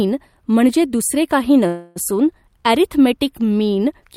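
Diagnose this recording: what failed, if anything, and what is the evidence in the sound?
Network stage, call audio freeze: after "म्हणजे दुसरे काही", from 1.67 to 1.98 s, a fading buzz or hiss holds for about 284 ms. Speech then resumes intact, likely from a drained jitter buffer.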